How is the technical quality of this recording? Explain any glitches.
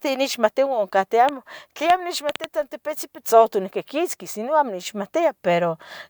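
A train of clicks mars the recording from 1.29 to 2.45 s. About five sharp pulses, each much the same shape, arrive at an uneven pace of roughly 3.5 per second, standing around 15 dB above the speech. They are heard as distinct popping over the sound, likely from electrical interference or a faulty connection or power supply. Unlike a single dropout click or random crackle, these repeat with a consistent shape for a limited stretch.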